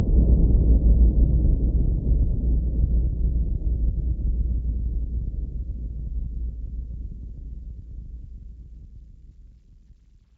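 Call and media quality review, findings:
No faults detected in this capture.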